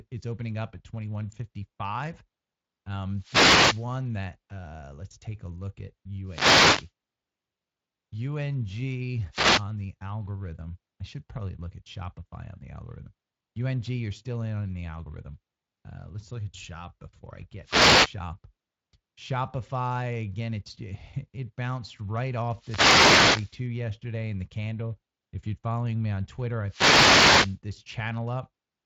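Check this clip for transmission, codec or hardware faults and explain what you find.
One fault recurs through the clip: wireless microphone noise hits at 3.12–3.93, 6.25–6.91, 9.30–9.65, 17.62–18.17, 22.53–23.60 and 26.66–27.59 s. The longest follows "it bounced right". Reflections cancel the FM radio signal, so receiver noise swells into brief swishes of static over the speech. The speech passes through a Speex codec that stops near 7.6 kHz.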